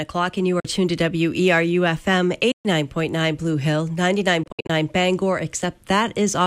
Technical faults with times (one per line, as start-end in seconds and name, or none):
0.60-0.65 Bluetooth dropout
2.51-2.65 Bluetooth dropout
4.43-4.70 Bluetooth dropout